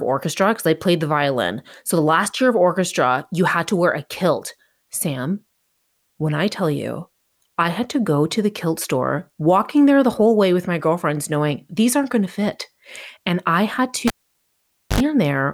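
At 14.07 s the cable is pulled and plugged in while live. A pop opens 0.88 s of near silence. On reinsertion the tip alone touches first, giving 75 ms of 50 Hz mains buzz before a second pop brings the speech back at 15.01 s.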